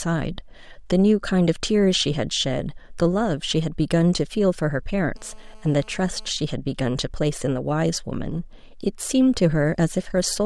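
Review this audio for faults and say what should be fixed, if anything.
GSM phone buzz from 5.16 to 6.30 s: a hard, raspy 217 Hz buzz with dense harmonics, steady and about 30 dB below the speech, as a nearby 2G phone's call bursts are rectified by the audio circuit. Keep phones away from the microphone and preamp.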